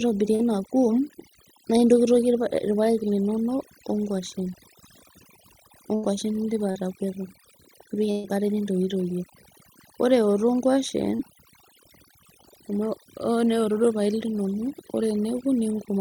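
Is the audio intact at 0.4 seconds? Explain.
No. From 0.35 to 0.42 s there is short concealed packet loss. About 40 ms of the stream never reached the decoder in time. The receiver patched the gap by extending the preceding sound, then blended back into the real audio. It is heard as a brief smear or wobble.

Overdone noise removal also runs through this moment. The suppressor cuts individual frequency bands hard wherever they sit near its noise estimate. Quiet parts of the speech are taken with them. The background drops and breaks up into twinkling specks.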